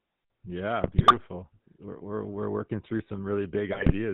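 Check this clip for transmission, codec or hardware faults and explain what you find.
Two faults are present: a GSM full-rate codec across the whole clip, and two bursts of GSM bit errors.

GSM full-rate codec, throughout: the speech is rebuilt from a vocal-tract filter fed by sparse, regularly spaced excitation pulses, which fits a 13 kbps full-rate coder. Nothing comes through above 4 kHz, and the voice carries a plainly audible buzzy, gravelly roughness.

GSM bit errors, 0.84 to 1.16 s and 3.72 to 3.93 s: corrupted bits reached the decoder, scrambling filter, pitch and gain values across many consecutive frames, 14 in the first burst and 10 in the second. The speech breaks into squawks, pops and gargling.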